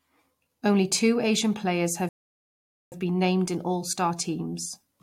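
At 2.09 s the speech halts in a rebuffering stall: the player ran out of downloaded audio and fell silent until more arrived, resuming at 2.92 s exactly where it stopped. Nothing is lost, but about 0.83 s is added, visible as a flat gap in the waveform and an empty band on the spectrogram.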